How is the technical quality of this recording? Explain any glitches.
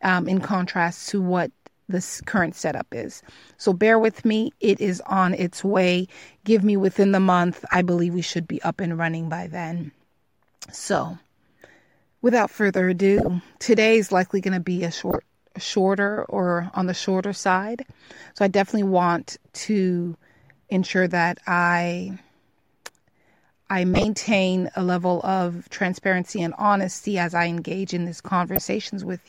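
The recording is marred by five short glitches from corrupt frames being decoded. They come at 7.71–7.79, 13.17–13.28, 15.11–15.16, 23.94–24.04 and 28.56–28.66 s. Each lasts a few frames and sounds like a chirp or noise burst, the first being the strongest. Damaged frame data was decoded anyway, so energy landed at the wrong frequencies. A dropout or concealed loss removes or smooths sound. These add spurious energy.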